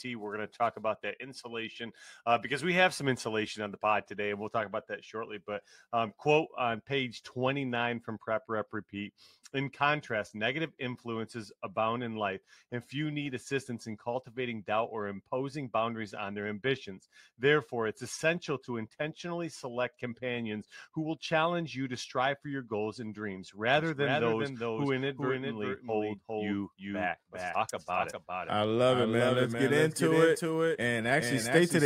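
At 23.78 s a doubled audio track cuts in abruptly and lasts to the end: a second, full-band copy of the sound trails the original by roughly 0.4 s, at around 5 dB lower. It is likely caused by the same audio reaching the mix twice, either through a slower capture path or an edit holding two offset copies. Unlike room echo or reverb, it is a single copy with no decay and no added room colour.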